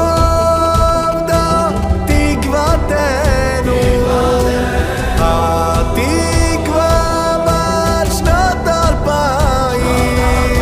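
From 0.41 to 1.84 s a galloping dit-dit-dit pattern of short buzzes cuts across the sound, sitting roughly 15 dB below it. These are GSM signalling bursts: a nearby 2G phone exchanging brief control traffic with the network emits its radio energy in pulses repeating at about 217 Hz. Some part of the audio circuit rectifies that RF, turning each pulse group into an audible buzz.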